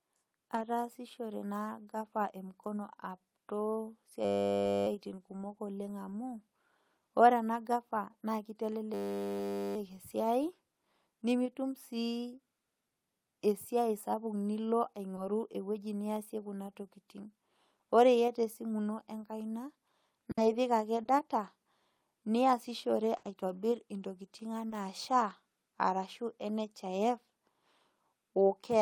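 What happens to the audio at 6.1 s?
Nothing goes wrong at 6.1 s; the speech continues without interruption or audible fault at that point.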